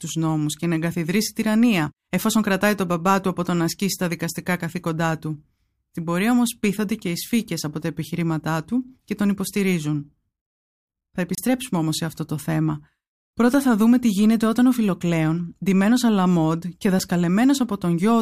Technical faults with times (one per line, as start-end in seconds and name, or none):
11.35-11.38 block of digital silence
16.99 block of digital silence